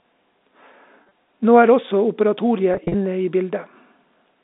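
Packet loss with pitch repetition occurs at 1.03–1.11 s and 2.74–2.94 s. The losses total 50 ms and 100 ms, in runs of 40 ms or less. The receiver bridges each gap by repeating the last pitch period, which gives a briefly held, buzzy sound over the narrow telephone band.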